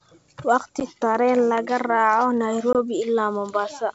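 At 0.80 s and again at 2.73 s the speech breaks with packet loss on an ADPCM call: hard-edged silent holes of 10 ms and 20 ms, pointing to about one and two lost packets. Unlike ordinary dropouts, the speech does not resume cleanly. The decoder's predictor and step size have drifted from the sender's, so each return comes back with brief, slight distortion, settling by about 0.85 s and 2.76 s over the G.722 wideband coding.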